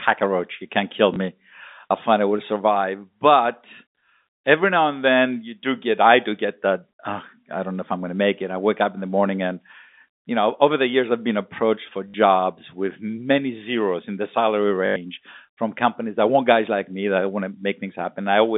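At 1.14 to 1.16 s after "can't kill", 12.08 to 12.14 s after "I've been approached for", and 14.86 to 14.96 s after "zeros in the salary", packet loss with last packet repeated fills 20, 60 and 100 ms gaps. The longer runs buzz at 50 Hz, which fits 20 ms packets.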